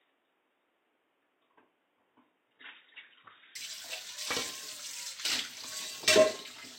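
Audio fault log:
0.00–3.55 s, input switched to a poorer device: The sound is dull and boxy from the start, with nothing above 3.8 kHz. It is also about 5 dB quieter, with a faint extra noise floor roughly 35 dB below the sound. At 3.55 s the full band and normal level return at once, with no gap. The likely cause is a change of input from a narrowband device to the main microphone. That poorer device cuts the top end and adds its own background noise.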